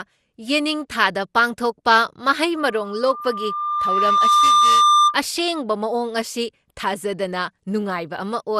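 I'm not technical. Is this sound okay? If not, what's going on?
No. Two things went wrong with this speech recording.

The first lasts the whole clip and is generation loss. The recording was most likely compressed and decompressed around seven times over, each time with an older lossy format. Every pass throws away a little more detail and adds its own small errors, and those errors pile up. The voice sounds hollow and swirly, crisp consonant starts are smeared, and the very highest sparkle is missing.

The second is a loudspeaker feedback squeal from 2.55 s to 5.18 s. A microphone was picking up the same loudspeaker it was feeding, so one pitch kept looping round and getting louder on each trip. You hear a single whistle-like tone at 1.2 kHz that swells over about two seconds until it is clearly louder than the voice, then stops at 5.18 s.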